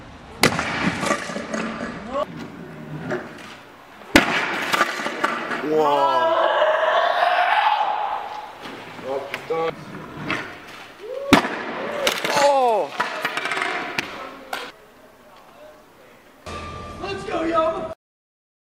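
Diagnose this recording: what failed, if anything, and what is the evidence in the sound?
Nothing stood out on listening that would point to a failure at any stage of the chain.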